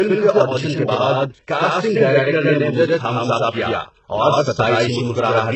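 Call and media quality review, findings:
Doubled audio track, throughout. Speech heard twice, the second copy trailing by roughly a tenth of a second at about equal loudness. The echo is dry, with no decay or room colour, unlike reverb. Likely cause: a second, slower capture path mixed back in, or an edit holding two copies out of step.

HE-AAC compression, throughout, heavily damaged. Nothing above 8 kHz. The treble below that is synthetic, copied up from lower bands by spectral band replication, so harmonics don't line up across the crossover, and s sounds come out gritty or lispy. The damage fits a very low bitrate, around 8 kbps. Likely component: an HE-AAC encoder in the media path.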